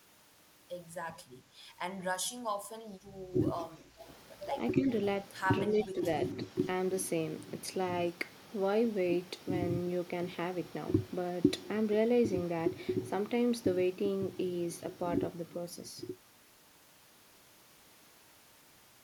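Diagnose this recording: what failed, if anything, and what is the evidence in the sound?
Call processing, background gated by the echo canceller: at 3.82 to 3.98 s the room sound dips about 9 dB, as the canceller clamps the microphone during loudspeaker playback.

Call processing, echo leak: faint copies of the speech trail 270 ms behind at 4.0 to 4.1 s and 5.79 to 5.87 s, likely residual loudspeaker echo the canceller missed.

Call processing, speech suppressed in double talk: at 4.75 to 4.89 s and 5.65 to 6.03 s the speech drops a few dB, likely the canceller attenuating both talkers during overlap.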